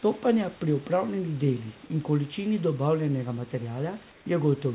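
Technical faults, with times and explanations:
4.12 to 4.26 s, comfort noise in place of the background: For 140 ms, the room noise becomes a steady, featureless hiss, about 2 dB quieter. The likely cause is discontinuous transmission. The sender paused, and the receiver filled the gap with synthetic noise.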